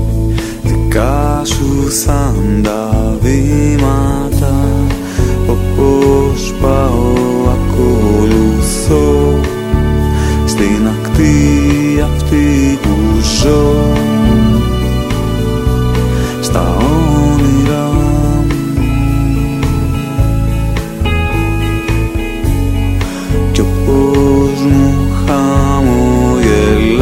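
Brief crackle marks the loudest peaks across the whole recording, which is hard clipping: the signal runs about 5 dB past what one stage can pass, so about 0.7% of samples are cut flat.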